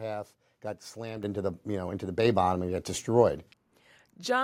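At 1.23 s, between "got slammed" and "into the you know", the microphone volume steps up by about 8 dB, and again at 2.25 s by about 4 dB, before "bottom and got destroyed": the call software raising input gain, so speech and background jump together, a sudden waveform envelope step and brighter spectrogram.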